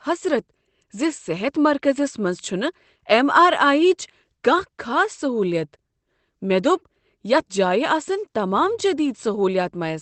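No technical faults can be heard anywhere in this speech recording. It has passed through a WebRTC call path, and its high end stops at around 8 kHz, which fits an Opus call codec running at a wideband setting.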